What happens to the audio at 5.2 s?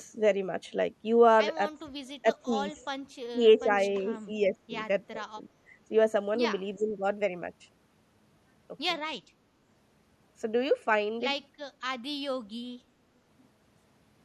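The speech dips sharply, by roughly 15 dB, from 5.11 to 5.26 s: speech suppressed in double talk, likely an echo canceller turning down its own talker along with the loudspeaker echo.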